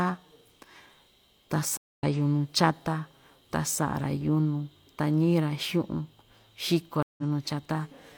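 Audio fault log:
1.77–2.04 s and 7.03–7.23 s, stream reconnect: the connection dropped twice, and each time the player went quiet, reconnected and started a fresh decoder partway through the live stream. The gaps last 220 ms and 154 ms. When the speech returns it has jumped ahead by about 150 ms, so a short stretch is lost rather than delayed. The reset decoder's first frame or two come in muted or faded, giving a soft onset after each gap.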